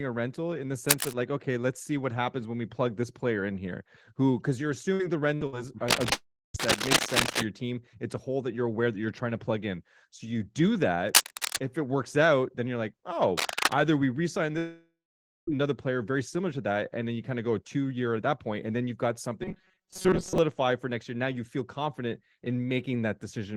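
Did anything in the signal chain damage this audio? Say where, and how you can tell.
Yes, at three stages of the chain.

Cable scratch noise sits at 0.89 to 1.14 s, between "a rental in the" and "like okay let's see", again at 5.88 to 7.44 s, at 11.09 to 11.60 s between "in so you do" and "if it works out", and at 13.38 to 13.73 s. These are dense, irregular crackling bursts, mostly about 5 dB above the speech and level with it in the last one. This points to the analogue wiring, most likely a worn connector or cable whose contact resistance jumps as it moves.

A burst of packet loss hits three times: 4.93 to 5.02 s, 5.35 to 5.44 s and 5.47 to 5.55 s. Each time the receiver stretches the last sound for about 57 ms, fading it into a brief buzz or hiss, and the speech then resumes with roughly 60 ms of audio gone. This is a network fault, with several consecutive packets lost or arriving too late.

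A long network dropout occurs at 6.12 to 6.57 s, inside the second scratch, and at 14.58 to 15.50 s, between "we resign" and "player very similar to". The concealment tail fades and gives way to silence, about 320 ms and 530 ms of it. The speech then picks up with roughly 420 ms and 900 ms missing. Most likely no audio reached the receiver for those stretches.

Robotic sound from repeated short buffers runs from 19.42 to 20.38 s. The speech becomes a rigid metallic buzz at 188 Hz that still loosely follows the syllables, and most of that stretch is repetition rather than new audio. A repeat rate of 188 Hz fits a buffer of about 5.3 ms being replayed. That is likely a driver or buffer stage starved of incoming data.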